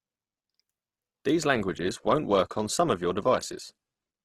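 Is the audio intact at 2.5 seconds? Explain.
No. At 2.5 s the clip is inside a stretch where the adaptive stream is at a lower bitrate, running from 1.55 s to the end. The connection slowed, so the player switched to a leaner encode, which fits a drop from Opus at around 64 kbit/s to about 16 kbit/s. The change is abrupt but leaves no gap. From that point nothing above 12.3 kHz is heard, so the treble sounds dulled, and codec artefacts become more noticeable.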